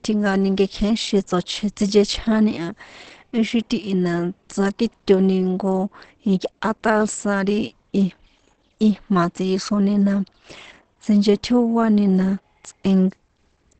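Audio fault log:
Throughout, Opus compression: the speech sounds muffled and hoarse, with plainly audible damage and nothing above 8.5 kHz. This is likely the Opus speech (SILK) mode at a low rate, which fits about 16 kbps, trimming bandwidth and roughening the voice's texture.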